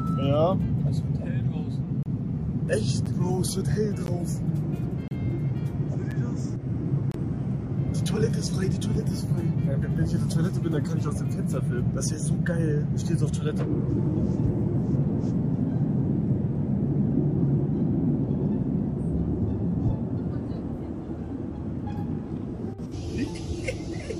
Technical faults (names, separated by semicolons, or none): gap between stream segments